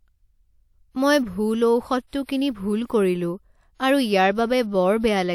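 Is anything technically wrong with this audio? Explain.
Yes, there's pre-echo in this speech at 2.07–2.13 s just after "মই ভুল", 2.23–2.29 s right before "কিনি ভুল কৰিলো", and 2.86–2.90 s after "কিনি ভুল". The codec's block-wide quantisation noise leaks ahead of sharp onsets, so a short hiss of about 35 to 60 ms precedes each one and the attacks sound smeared.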